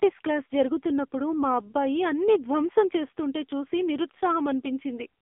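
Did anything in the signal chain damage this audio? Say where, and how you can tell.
Yes, the codec stage did it, and it runs the whole length of the speech. This is the AMR narrowband mobile codec, heavily squeezed: the band stops dead around 3.5 kHz with the lows thinned below about 250 Hz, and the voice has that buzzy, synthetic edge you get when the vocal-tract model is fed too few pulses per 5 ms. That degree of damage fits a low mode, around 6.7 kbps.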